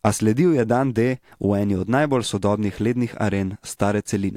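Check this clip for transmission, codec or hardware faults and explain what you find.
Nothing in the recording points to a transmission, codec or hardware problem, so there's nothing to flag here.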